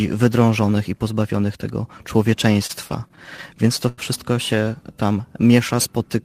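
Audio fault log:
2.53–4.00 s: repeated stalls (stutter). Ten brief hold-ups, the longest 91 ms, add about 203 ms as late-arriving packets left the jitter buffer empty and the last sound was stretched to fill each wait. Unlike dropouts, nothing is missing: the speech drags and hiccups rather than cutting out.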